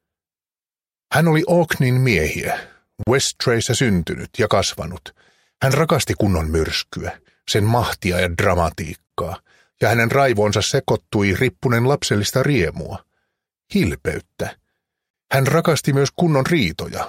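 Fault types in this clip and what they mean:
Gap at a join of encoded pieces: silences of 34 to 39 ms cut into continuous sound at 3.03, 9.07 and 15.10 s, with smeared edges. Pieces encoded separately were joined with each run's leading delay and final-frame padding left in.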